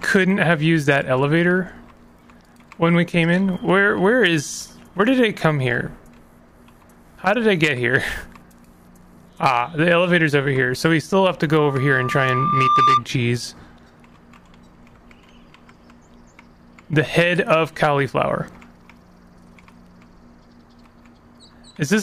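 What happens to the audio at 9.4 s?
Nothing goes wrong at 9.4 s; the audio plays through that moment intact, with no dropout, click or other disturbance.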